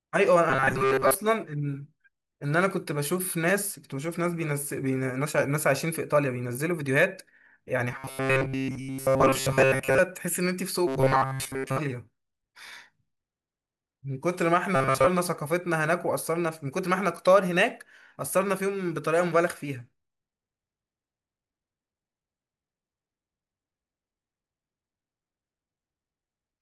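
Robotic sound from repeated short buffers at 0.50–1.15 s, 7.91–10.00 s, 10.87–11.78 s and 14.76–15.07 s: the speech becomes a rigid 133 Hz metallic buzz, likely from starved playback looping roughly 7.5 ms fragments in place of most of the real audio. A spectrogram shows evenly spaced harmonic lines at multiples of 133 Hz; the waveform repeats identical cycles.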